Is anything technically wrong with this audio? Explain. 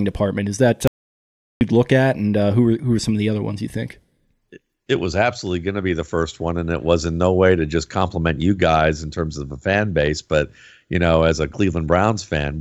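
Yes. An audio dropout to silence runs from 0.88 to 1.61 s, removing about 0.74 s of the speech. The input signal was likely interrupted, through a lost connection or a momentary mute, while recording continued and filled the gap with silence. The speech stops abruptly mid-flow, the background disappears with it, leaving dead silence with no room tone, and then the speech resumes just as suddenly, with whatever was said during that stretch missing.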